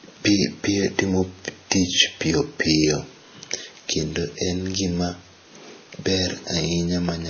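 A speech clip that has likely been through transcoding between lossy codecs, a low-rate MP3-style stage and then a WMA-style one, which fits roughly 24 kbit/s followed by 64 kbit/s. Nothing survives above 6.5 kHz, and artefacts from both stages overlap throughout.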